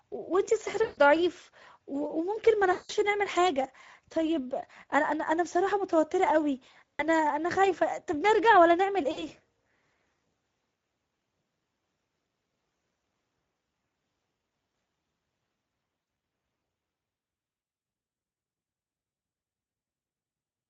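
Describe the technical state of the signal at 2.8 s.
At 2.8 s the signal is inside a stretch of VoIP packet loss concealed by the speech codec, running from 2.71 to 2.92 s. About 180 ms of audio went missing, which fits nine 20 ms frames. The decoder kept extending its last pitch and filter with decreasing gain, so the speech is stretched into a buzzy tone or coloured noise that fades, and recovers only gradually afterwards.

Underneath, the whole clip carries plainly audible Speex codec damage. The sparse coding of the excitation makes the speech noisy and hoarse, which points to a mid-range setting of around 16.8 kbps.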